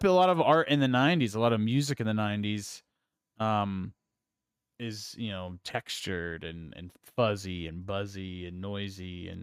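No technical faults turn up anywhere in this speech recording. Nothing in the audio calls for a timestamp or a closer look.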